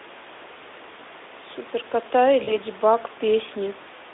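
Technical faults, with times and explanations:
2.43–2.57 s, VoIP packet loss concealment by the speech codec: about 40 ms of speech went missing, consistent with two lost 20 ms frames. The decoder filled the gap by repeating its last pitch and spectral shape at falling gain, so the speech is briefly stretched into a buzzy tone or coloured noise that fades, then stays weak until about 2.57 s. On a spectrogram, the energy runs flat and smeared across the gap inside the narrow 300 Hz to 3.6 kHz Speex band. The waveform shows a decaying segment.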